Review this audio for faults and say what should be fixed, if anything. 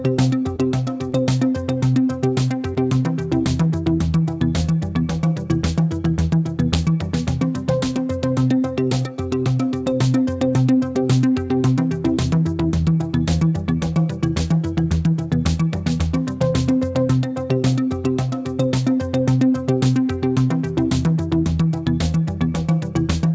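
Integer overflow produces sharp cracks at 0.19, 6.74, 14.92, 15.47 and 23.10 s. At each, peaks that exceeded full scale by at most about 2 dB wrapped to the opposite sign instead of being limited. Prevent it by saturating sums and gain stages before converting to fixed point.

Short concealed packet loss shows as brief smears at 0.56 to 0.60, 1.10 to 1.14 and 2.74 to 2.78 s. Each is about 20 ms of audio that arrived too late and was filled by extending the preceding sound, then crossfaded back. Prevent it with a deeper jitter buffer or a more stable network path.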